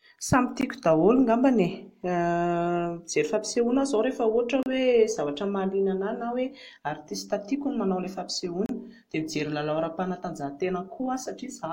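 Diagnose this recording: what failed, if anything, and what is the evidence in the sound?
The failure is at the codec stage: gaps at joins of encoded pieces, repeating every 4 s. Brief silences cut into continuous speech at 0.61 s (15.5 ms), 4.63 to 4.66 s and 8.66 to 8.69 s (32 ms each), the last just after "no manao an'ilay". Each piece was encoded separately and joined untrimmed, so encoder start delay and end padding remain. A waveform shows flat notches with smeared edges. A spectrogram shows thin blank vertical stripes across all frequencies, and the speech resumes where it stopped.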